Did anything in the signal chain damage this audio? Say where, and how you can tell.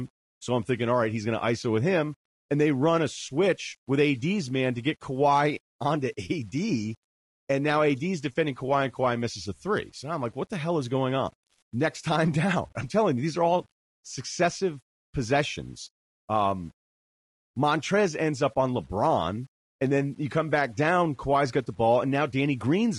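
Yes. Low bit depth without dither runs throughout. Quiet speech turns gritty with error roughly 40 dB down, which points to a sample-format conversion with 8-bit rounding.

Low-delay AAC compression is also present throughout. Its short frames blur the pitch harmonics, leaving rough, grainy speech, with the codec stage likely AAC-ELD near 32 kbps.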